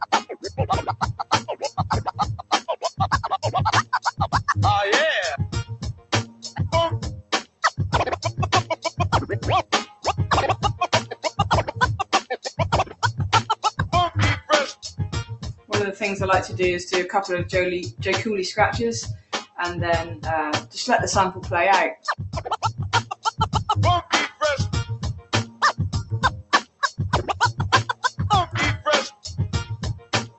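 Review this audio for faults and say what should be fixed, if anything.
A noise suppressor meant for speech was left running on non-speech sound. It treats held tones and tails as noise. Level swings by around 15 dB throughout.

The noise suppressor also cut specific sound at 0.02–4.51 s, 5.69–7.63 s, 8.7–15.71 s, 19.17–26.83 s and 27.88–30.38 s. Sustained parts sink by about 17 to 19 dB at worst.

The call codec's top end stops near 8 kHz.

To prevent this, disable noise suppression on the call path whenever music or non-speech sound is being sent.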